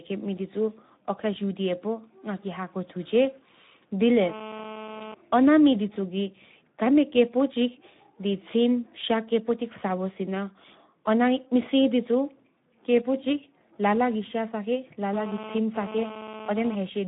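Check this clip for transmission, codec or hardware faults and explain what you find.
Two faults are present: Speex codec damage across the whole speech clip, and two bursts of GSM phone buzz.

Speex codec, throughout: the speech is hoarse and noisy, with a grainy edge. Speex is a CELP coder, and at this setting, which points to roughly 11 kbps, too few bits go to the excitation signal, so the voiced sound is rebuilt from a coarse approximation. The band is confined to about 150 Hz to 3.7 kHz, giving a narrow telephone-like sound.

GSM phone buzz, 4.23 to 5.14 s and 15.13 to 16.75 s: a hard, raspy 217 Hz buzz with many harmonics sits about 13 dB below the speech and has no relation to it. A nearby 2G handset transmits in bursts 217 times a second, and the audio circuitry rectifies those radio pulses into audible sound. The first occurrence is steady, as during a call. The second comes and goes, as during a data transfer.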